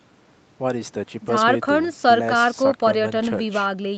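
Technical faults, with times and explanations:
1.39–1.41 s: lost packet rebuilt from error correction. A single dropped frame, about 20 ms, was replayed from the low-bitrate copy in the next packet, so the sound turns briefly rougher and noisier rather than cutting out.
3.17–3.39 s: lost packet rebuilt from error correction. A longer run, about 120 ms, fits roughly six separate lost packets, each rebuilt from its coarse backup copy, giving an audibly grainy, noisier stretch with no gap.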